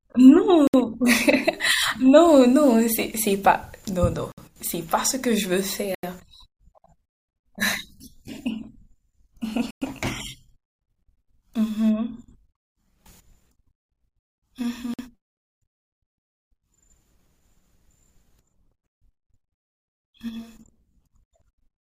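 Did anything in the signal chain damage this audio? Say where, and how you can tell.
Yes. The speech cuts to true silence five times, at 0.67, 4.32, 5.95, 9.71 and 14.94 s, for 50 to 110 ms, then resumes. This is likely a Bluetooth stall: the headphone buffer ran dry awaiting resent packets. Codec packet loss would leave concealment smear instead.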